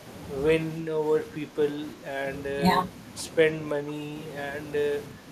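The speech clip has short level dips at 0.81–0.95, 1.32–1.58, 1.94–2.10, 2.57–2.64, 3.79–4.15 and 5.11–5.31 s. It drops by roughly 5 to 10 dB. This is likely speech suppressed in double talk, where an echo canceller mistakes the talker for loudspeaker echo and turns both down.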